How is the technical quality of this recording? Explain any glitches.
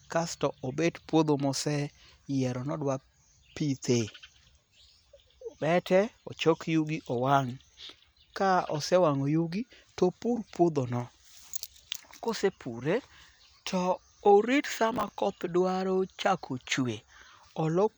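There's one clear glitch, a burst of processor overload crackle from about 14.94 to 15.18 s. The machine couldn't finish its small audio buffers on time, around ten in a row, and each miss replayed a scrap of old audio with hard edges. That stacks into a short, gritty tearing over the speech, which clears once the load drops.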